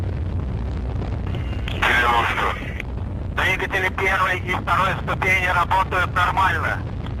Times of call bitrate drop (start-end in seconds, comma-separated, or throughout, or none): 2.54-4.81